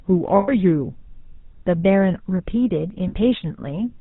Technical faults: GSM full-rate codec; lost GSM frames

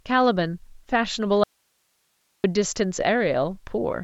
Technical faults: audio dropout to a faint residue

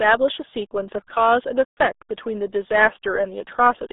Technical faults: RealAudio 14.4 codec

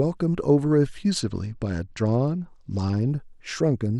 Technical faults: Bluetooth SBC bit pool drop

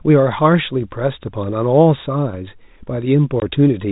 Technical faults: packet loss filled with silence

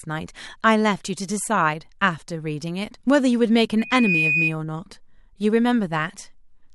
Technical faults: loudspeaker feedback squeal

